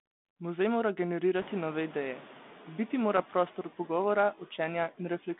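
A speech clip where the background noise dips between phrases and swells back under the voice. These are noise suppressor artifacts: the suppressor judges which bands hold steady noise frame by frame and pulls them down by about 8 dB, so the residue pumps with the speech. The effect is more obvious after the room noise climbs by about 23 dB around 1.5 s. Two short rough bursts with sudden level jumps and pops occur at 1.40 to 1.47 s and at 3.17 to 3.20 s. These are bit errors on an ADPCM link, which fit an error rate around a tenth of a percent. Each corrupted bit throws the decoder's step size and predictor off, so the damage rings on briefly rather than clicking once. The narrow 200 Hz to 3.6 kHz band and light coding grain fit 32 kbit/s G.726 telephone coding.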